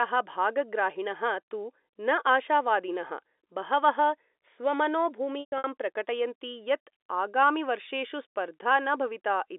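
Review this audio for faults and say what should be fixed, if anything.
Packet loss with pitch repetition runs from 5.40 to 5.64 s. Across those 240 ms, about 180 ms of the speech is missing. At each gap the receiver repeats the last pitch period, so the sound briefly holds with a buzzy, frozen quality. During the longest run of 120 ms that repetition fades away over about 50 ms into silence before the speech cross-fades back in. The gaps fit losses of roughly 30 ms packets. Preventing it needs a steadier network path or a larger jitter buffer, and adding forward error correction or redundant packets would let the receiver rebuild lost frames rather than conceal them.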